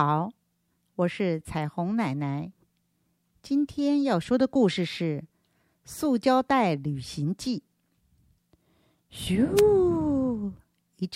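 A speech recording with one brief burst of static, a short swish from 9.56 to 9.61 s that lasts about 50 ms. It is a wireless microphone noise hit: the FM radio link faded as reflected signals cancelled, letting receiver noise rise through the audio.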